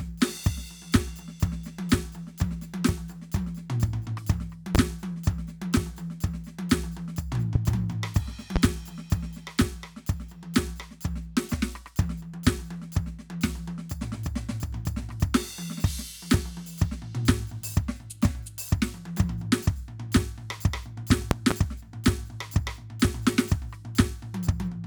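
Loud pops land in the music at 4.75–4.78, 7.55–7.58 and 8.56–8.59 s, each a single sharp crack about 20 dB above it, then a double pop at 21.31–21.54 s, a bit hotter. Likely voltage spikes from a plug, switch or static.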